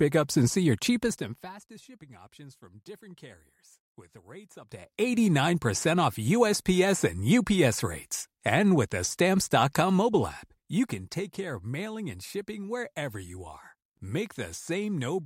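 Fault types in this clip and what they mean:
Listening closely, nothing in the speech stood out as a technical fault.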